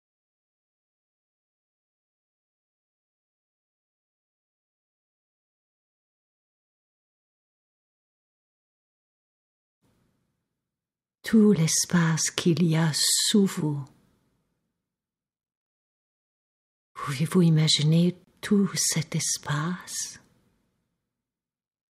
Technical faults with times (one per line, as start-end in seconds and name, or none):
18.24-18.27 gap at a join of encoded pieces